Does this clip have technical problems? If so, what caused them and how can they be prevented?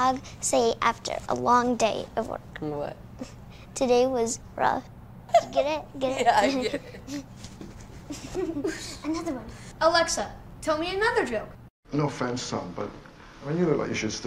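Yes. At 12.39–12.42 s, a corrupt frame was decoded: damaged bits across a few frames produced a brief burst peaking around -20 dBFS. Error detection with concealment would prevent it.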